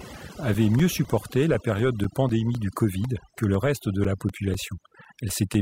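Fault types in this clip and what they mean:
overdone noise removal: Across the whole speech clip the background drops away, broken into twinkling specks. A noise reducer set far too aggressively is pulling individual frequency bands down or out entirely whenever they drop close to its noise estimate. Because the quieter parts of the voice fall into that range too, they get stripped away along with the noise.
periodic USB or driver dropouts: From about 0.29 s to 5.55 s a steady tick sounds every 0.25 s, some twenty in all, each a tiny gap of roughly 4 ms where the audio drops to silence. The even spacing points to a background task stalling the USB bus or audio driver on a fixed schedule, so a sliver of signal is lost each time and heard as a regular click against the speech.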